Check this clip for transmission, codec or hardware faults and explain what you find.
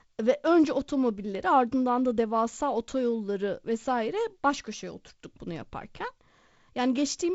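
One fault turns up: a bit error spike. At 1.35 s a single sharp tick cuts through the speech, broadband and unrelated to the talker. It comes from one flipped bit in a single sample, which throws that value off by a power of two before it snaps straight back. The G.722 wideband coding underneath is working normally, with nothing above about 7.7 kHz and a faint coding noise that fits its 48 kbit/s mode.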